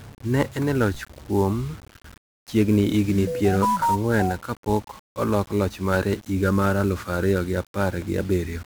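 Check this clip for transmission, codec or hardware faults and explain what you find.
Two faults are audible: heavy 1-bit DFPWM compression across the whole speech clip, and a single DC step near the start.

The 1-bit DFPWM compression runs from start to finish. Each sample is reduced to one up-or-down bit steering an adaptive level, so dense broadband quantisation noise rides on everything, which fits a 48 kbps stream. The speech sounds fuzzy and crackly, with treble sunk in hiss. Unlike plain added noise, the grit tracks the signal's movement.

The DC step comes at 0.94 s. The waveform's zero line jumps abruptly and then bleeds back as a high-pass near 5 Hz pulls it toward zero, giving one low thump. The speech continues unbroken, which separates it from a dropout or a digital click.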